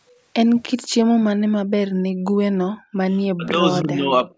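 From 0.65 to 0.7 s a faint copy of the speech arrives about 311 ms late, well below the direct voice, likely an echo leak where the far end's canceller let loudspeaker pickup through.

Between 1.91 and 2.25 s, and again from 2.76 to 3.02 s, the room background drops by about 40 dB and then returns. This is background gated by the echo canceller, which clamped the microphone while its loudspeaker played.

From 3.36 to 3.63 s the speech dips steeply, then from 3.83 to 4.29 s more mildly. This is speech suppressed in double talk, with the canceller likely turning down the talker while both sides spoke.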